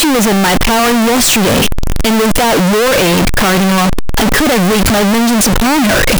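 From start to finish the speech is blasted into a harsh, near-square roar sitting at an almost fixed, high level, background noise as loud as the talking, though pitch still comes through. That's float read as integer, most likely 32-bit float samples decoded as 32-bit integers.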